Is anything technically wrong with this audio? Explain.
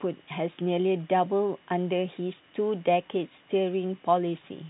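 No, nothing is technically wrong.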